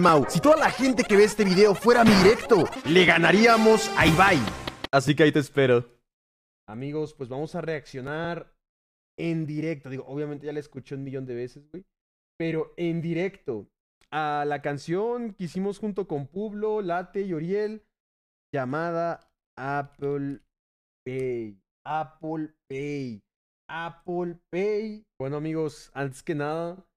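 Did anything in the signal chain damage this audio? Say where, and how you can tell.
Yes. Periodic USB or driver dropouts at the driver or buffer stage: from 0.09 s to 10.07 s, about ten ticks occur every 1.00 s. Each is a skip of roughly 2 ms, where a blocked USB transfer or driver callback lost samples and the waveform closes up over the gap.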